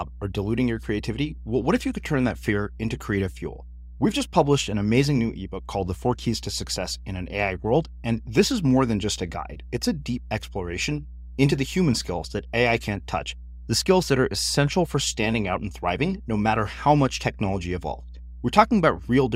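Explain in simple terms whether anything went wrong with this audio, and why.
A steady low drone runs underneath the speech from start to finish. This is mains hum: electricity from the power supply leaked into the recording, most likely through a ground loop between connected equipment or a transformer sitting close to the cables. The tone sits at 60 Hz, the frequency of the power line in many countries, with a few overtones above it. It is fairly loud, clearly audible beneath the talking rather than buried far below it.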